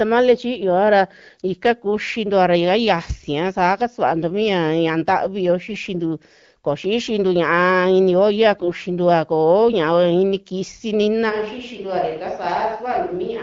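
At 5.68 s the speech turns briefly scratchy and gargly for about 84 ms. These are AMR bit errors. A few percent of the weakly protected bits in the coded frames arrived flipped. The damage spans about four codec frames. The checksum still passed, so the decoder used the bad values. Pitch and level hold roughly steady, but the excitation pulses and the fine spectral detail go wrong, giving a hoarse rasp.

A second, longer burst of AMR bit errors starts at 8.52 s, right after "ini olla", and lasts 0.2 s. That fits about ten frames. The error rate is similar, near five percent.

From 11.31 s, after "inii kisi nina", the sound changes suddenly and stays that way to the end. It becomes hollow and roomy, with thinner bass. The level drops by about 5 dB, and room noise rises to about 35 dB below the speech. This is likely a switch to a distant microphone, with the close microphone's signal lost. 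The light AMR-WB coding colour remains throughout.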